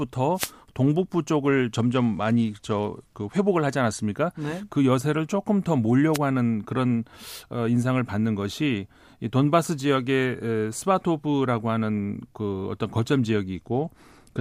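A short swish of static breaks over the speech from 0.35 to 0.52 s, and a briefer burst returns at 6.13 to 6.18 s. These are wireless microphone noise hits. The analogue FM radio link faded as reflected signals cancelled the direct one, so the receiver's own noise surged up into the audio until the signal recovered.

Between 1.75 and 3.49 s, and again from 13.55 s to the end, the speech turns dull and loses its treble while a gritty, granular noise creeps underneath. This is a Bluetooth SBC bit pool drop. The sending device cut its bit pool, most likely because the wireless link was congested, and the collapse in quality fits a fall from about 28 to 13, or roughly 102 kbps. With so few bits, the upper sub-bands get almost nothing and the remaining bands are quantised coarsely.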